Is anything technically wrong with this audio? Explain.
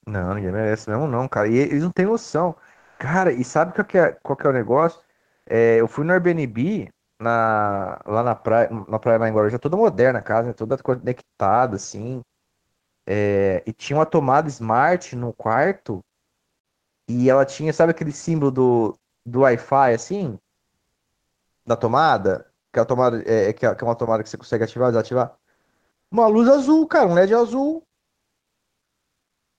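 Yes. Comfort noise in place of the background fills the pauses at 2.71–2.99 s, 5.15–5.45 s, 20.55–21.65 s and 25.51–26.11 s. The likely cause is discontinuous transmission (Opus DTX): the sender goes quiet and the receiver synthesises steady, featureless noise. That noise is about 4 to 8 dB louder or quieter than the real background. On a spectrogram these gaps are flat, uniform bands without the background's detail, and on the waveform they show as a small step in level.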